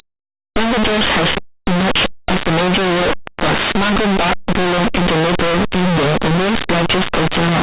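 Throughout the speech, plain linear 8-bit samples are decoded as mu-law codes, a case of linear audio read as companded. Values just to one side of zero expand to the largest outputs while their opposites stay tiny, producing very loud, harsh distortion.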